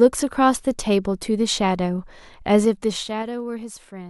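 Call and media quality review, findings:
Zipper noise, 2.55–3.40 s: ticking during a level drop of roughly 15 dB in 3 dB unsmoothed gain steps, about five per second. Waveform shows staircase envelope; spectrogram shows faint vertical click lines.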